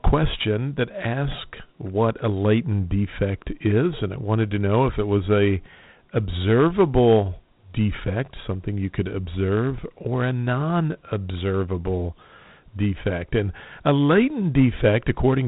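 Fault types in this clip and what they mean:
Dialogic VOX ADPCM: coarse 4-bit adaptive telephony coding, consistent with 32 kbps; the speech has nothing above 3.8 kHz and carries a gritty hiss that follows it.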